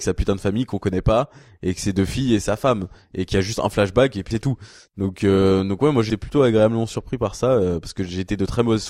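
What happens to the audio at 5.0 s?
Nothing goes wrong at 5.0 s; the speech runs through that moment intact, with no break, glitch or change in the sound.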